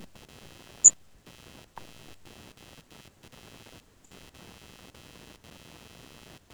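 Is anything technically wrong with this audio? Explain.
Yes. Computer activity noise runs throughout. Processor or mouse load shifts the shared ground, adding buzzy chirping near 100 Hz, roughly 20 dB below the speech.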